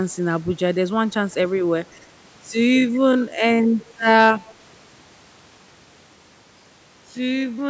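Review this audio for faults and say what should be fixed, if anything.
Time-stretched section, 2.22 s to the end: software likely lengthened this part to fill a longer slot, holding pitch by repeating short pieces while running at about half speed. From 2.22 s the pace drops abruptly, while its pitch stays put. Fitting the timing by editing or re-recording, rather than stretching audio this far, would avoid it.

Echo leak, 4.46 to 4.54 s: one end was likely playing the call over a loudspeaker, and its echo canceller failed to remove everything its microphone captured, so a scrap was sent back. A faint delayed copy trails the sound by 151 ms, around 30 dB below it. A headset on that end, or stronger echo suppression there, would prevent it.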